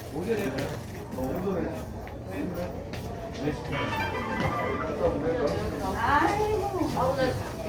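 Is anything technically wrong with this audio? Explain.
Yes, there are two playback-timing faults.

At about 0.45 s there is a skip ahead. Roughly 0.4 s of audio was discarded, either lost in transit or dropped when the jitter buffer overflowed with later audio already queued. Playback jumps straight to that later material with no filler, so the sound lurches forward abruptly. A waveform shows the two sides butted together with no gap. A spectrogram shows a hard vertical seam where the spectral content changes instantly.

From 1.03 to 1.49 s there is a jitter buffer speed-up. The buffer was holding more audio than its target, so the receiver repeatedly cut out small pitch-period-sized pieces, about a tenth of a second in total. That stretch plays at roughly 121% speed with the pitch unchanged, and it sounds hurried. On a spectrogram, events within this span sit closer together in time while their frequency bands stay at the same height.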